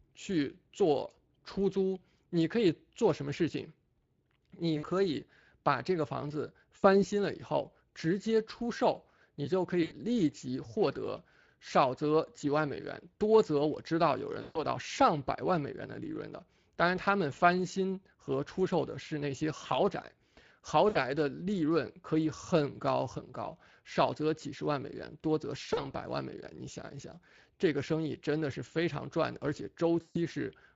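The Speex codec damage is plainly audible throughout, a grainy, hoarse coarseness suggesting a setting near 20 kbps. On a spectrogram, speech harmonics look blurred, with noisy texture between them.

VoIP packet loss concealed by the speech codec strikes at 4.77–4.90, 6.77–7.01, 9.83–9.95, 14.41–14.65, 20.89–20.98, 25.73–25.86 and 30.01–30.18 s, with 40 to 140 ms missing each time. The decoder stretches the last sound into a fading buzz or noise. A spectrogram shows frozen horizontal harmonics, and the waveform shows a shrinking envelope.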